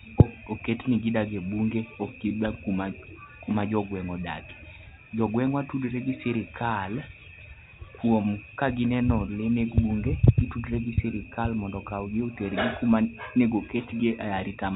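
No technical faults are present in the speech, which carries the ordinary character of G.711 telephone coding at 64 kbps, with nothing above 4 kHz and at most a faint level-following quantisation hiss beneath it.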